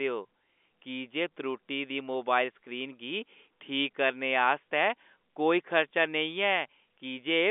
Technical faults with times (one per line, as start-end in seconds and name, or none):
none